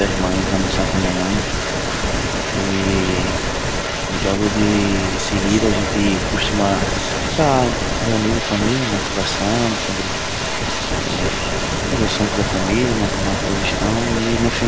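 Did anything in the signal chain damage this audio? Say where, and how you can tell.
Yes. Through the whole clip, from 0 to about 14.7 s, a second copy of the speech trails the original by about 0.3 s (297 ms), sitting roughly ten decibels below it. That delayed double points to a likely echo leak in the call processing: the far end was playing the call on a loudspeaker, its echo canceller did not fully remove what its microphone picked up, and the residue was sent back. The speech tops out at 8 kHz, which fits the G.722 call codec.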